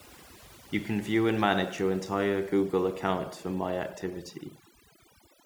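Speech runs from start to finish over a background that has been pushed down, with small twinkling specks flickering in the gaps. That is overdone noise removal: the noise reduction was set too strong, so every frequency band sitting close to its noise estimate gets pulled far down or cut, and the quieter parts of the speech are stripped away along with the noise.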